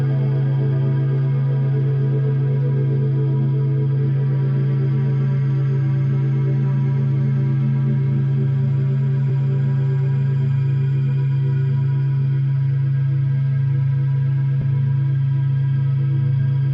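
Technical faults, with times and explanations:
9.29 s and 14.61–14.64 s, compressed frames skipped: the audio lurches forward. At 9.29 s the jump is roughly 20 ms, which fits one 20 ms frame going missing or being rejected by the decoder. At 14.61 s about 40 ms vanishes, suggesting a couple of frames. Unlike a dropout there is no silent gap.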